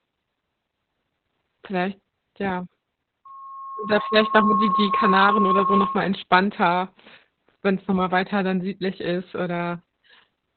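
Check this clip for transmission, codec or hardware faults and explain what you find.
One codec fault runs the full length of the speech: Opus voice compression. Nothing is present above 4.4 kHz, which points to narrowband SILK coding at a rate near 8 kbps. The narrowed band leaves the speech muffled, and its coarsely coded excitation makes it hoarse and faintly robotic.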